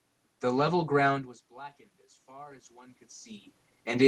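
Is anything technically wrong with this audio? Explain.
Yes. From 1.08 s to the end, the speech and the room noise behind it swell together, climbing steadily rather than jumping. This is automatic gain rising. Around one second in, the talker moved away from the microphone and the input level fell by about 24 dB. The gain control read that as a too-quiet signal and slowly raised its gain to compensate, lifting the background along with the voice.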